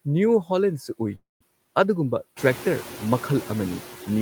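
Speech runs under noise suppressor artifacts from start to finish: the steady background is pulled down by about 11 dB between phrases and comes back up under them. On a spectrogram the noise floor looks patchy and breathing, with isolated specks where bins were only partly removed, and this gets stronger once the room noise rises by about 14 dB around two and a half seconds in. Right after "ꯅ꯭ꯌꯨ ꯍꯣꯂꯦꯟꯁꯨ ꯎꯏ", from 1.15 to 1.42 s, a call audio freeze stops the speech. The last sound is stretched into a fading buzz or hiss, followed by about 160 ms of near silence. The speech then carries on with nothing lost but everything after it sitting about 251 ms later. This likely comes from delayed packets draining the jitter buffer. The waveform shows a decaying smear and then a flat stretch, and on a spectrogram that smear appears as frozen, blurred horizontal bands.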